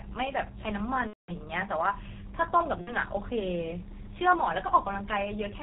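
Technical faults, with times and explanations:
Throughout: G.723.1 codec. The speech sounds heavily muffled and hoarse, with nothing above 4 kHz and smeared consonants. That's the codec's slow 30 ms frame updates and very low rate at work, which fits roughly 6.3 kbit/s.
1.07–1.33 s and 2.81–2.96 s: VoIP packet loss concealed by the speech codec. The voice fades out as the decoder replays its last pitch and filter, and the first gap goes silent from its third lost frame. The first gap fits about 210 ms of lost frames, the second about 60 ms, and the voice stays weak briefly after each.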